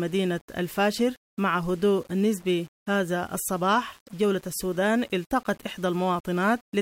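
From start to finish the speech carries grainy, signal-following distortion, likely low bit depth without dither, with samples rounded to about 7 bits. The error sits roughly 30 dB under the speech and rises and falls with it, unlike steady hiss, so quiet syllables turn gritty and fade sputter.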